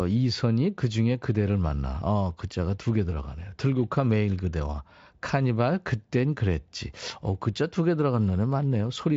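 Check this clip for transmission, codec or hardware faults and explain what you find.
Nothing faulty turns up anywhere in this recording.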